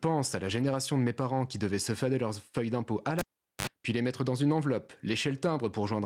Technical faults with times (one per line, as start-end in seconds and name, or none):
0.47-0.65 lost packet rebuilt from error correction
3.19-3.67 cable pulled and plugged in